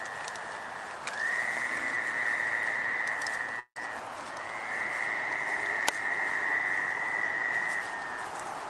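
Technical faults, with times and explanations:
3.59–3.81 s, call audio freeze: the sound stops and is replaced by a fading buzz that drops to about 80 ms of silence. It then picks up exactly where it left off, with nothing lost. This is likely a jitter buffer running dry while packets were held up. The stall adds about 164 ms of delay to the call. On a spectrogram the last frame's harmonics smear horizontally and fade into a blank column. The waveform shows a decaying repetitive stretch, then flat silence.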